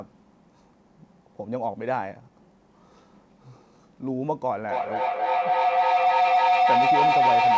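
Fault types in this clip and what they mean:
feedback howl: a tone near 700 Hz swells from 4.63 s to the end, repeating about every 300 ms and peaking about 8 dB above speech, as microphone and loudspeaker loop.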